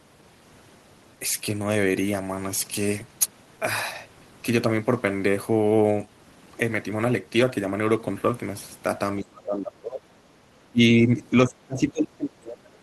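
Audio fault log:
9.2–10.09 s, 10.69–11.08 s and 11.44 s to the end: speech suppressed in double talk. The speech sinks by up to about 25 dB or breaks into pieces, likely because the echo canceller mistook it for loudspeaker echo while both sides talked. The talker is cut, not just the room behind them.
10.37–10.41 s: background gated by the echo canceller. For 40 ms the room sound drops by about 6 dB while the loudspeaker plays, then returns. It is a brief, shallow dip in ambience rather than a deep loss of the speech itself.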